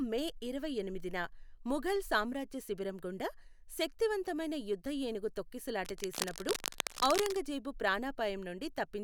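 Cable scratch noise, 5.85 to 7.37 s: dense, uneven rustling bursts almost as loud as the speech, likely from a worn connector whose contact resistance fluctuated as it moved.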